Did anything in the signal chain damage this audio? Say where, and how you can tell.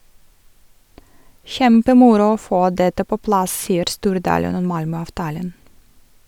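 Yes: loose connector crackle from 3.63 to 3.69 s, right after "få dette på plass", points to the analogue wiring. A worn or dirty contact briefly made and broke, chopping the speech into an irregular scratchy burst, with pops where any DC on the line jumped.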